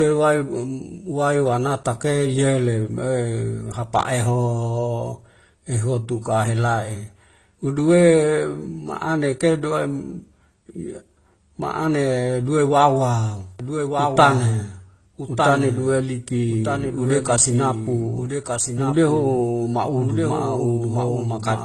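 The speech has most likely passed through two lossy codecs in a row, with the character pointing to low-rate AAC followed by Opus at a similar rate. This is transcoding between lossy codecs. The second encoder spends its limited bits reproducing the first one's smearing and swirl, then adds its own coarse texture on top. Both kinds of artefact are audible together for the whole clip, and nothing survives above 12.1 kHz, so the top of the sound is dull and clipped off.

From 13.60 s, just after "ma'ane duwe wawa", the same audio is mixed back in a second time. This is a doubled audio track, with the copy probably arriving over a slower capture path. It trails the original by roughly a second and sits a few decibels quieter. The copy is full-band and dry, with no decay or room colour. It cuts in abruptly and runs to the end, so every phrase is echoed by a clean, slightly softer repeat about a second later.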